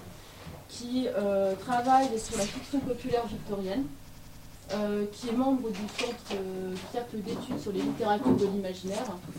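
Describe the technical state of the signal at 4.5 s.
At 4.5 s the signal is caught in a system hang loop, running from 4.09 to 4.55 s. The system froze while the hardware kept replaying its buffer. One 93 ms slice repeats five times, at 10.8 Hz, which fits a 4096-sample buffer. It sounds like a machine-gun stutter, and roughly half a second of audio is lost.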